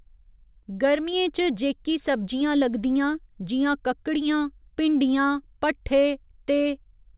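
No technical faults are audible.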